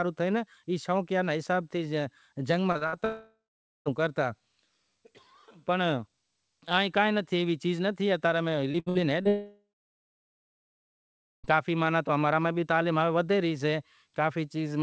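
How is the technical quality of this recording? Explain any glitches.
The recording has clear network faults: two clusters of lost call audio, each ending in a long gap. Throughout, the sound stops at 8 kHz, which fits a wideband call codec such as G.722.

Short concealed packet loss, 2.72 to 2.78 s and 2.78 to 2.84 s: two consecutive pieces of about 30 ms each failed to reach the decoder in time. The receiver patched each by extending the preceding sound, so there is a quick smear or wobble where detail briefly goes missing.

Burst of packet loss, 2.87 to 2.96 s: about 60 ms of consecutive audio was lost. The receiver continued the last sound while fading it down, producing a brief held buzz or fading hiss before the audio picks up again with that stretch missing.

Long network dropout, 3.05 to 3.89 s and 9.28 to 11.47 s: no usable audio arrived for about 0.81 s and then about 2.16 s, likely because the network connection stalled. 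Concealment stretches the last sound into a fading tail, leaving about 0.49 s and 1.79 s of silence respectively before the audio returns with those stretches gone.

Repeated packet loss (robotic sound), 8.72 to 9.28 s: four losses in quick succession, the longest 65 ms, leave about 31% of this span filled in by concealment. The repeated patching makes the audio choppy with pieces missing, running straight into the second dropout.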